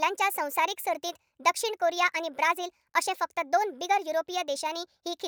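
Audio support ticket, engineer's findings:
Wrong sample rate, entire clip: speech high and hurried, about 1.38x speed, pitch up about 5.5 semitones; fits 32 kHz audio played at 44.1 kHz. Spectrogram: harmonics and formants shifted upward, waveform time-compressed.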